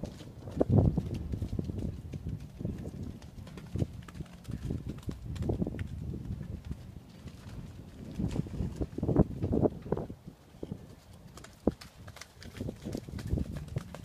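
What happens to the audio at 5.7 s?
Nothing goes wrong at 5.7 s; the audio carries on intact through that moment, with no dropout, click, distortion or other fault.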